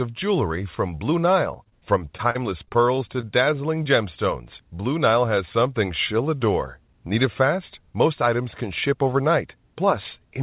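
From 1.54 to 3.25 s the speech breaks up with repeated packet loss, giving a robotic sound. Eleven gaps, the longest 42 ms, are patched by extending the preceding audio, leaving choppy fragments. Overlapping this, a jitter buffer slow-down runs from 2.77 to 3.76 s. Repeated pitch periods add about 70 ms, so the speech plays at 94% speed with drawn-out sounds. At 3.84 s a short concealed packet loss of roughly 20 ms is bridged from the last sound, heard as a brief smear. Throughout, the telephone-band codec leaves nothing above 4 kHz, consistent with G.711 A-law.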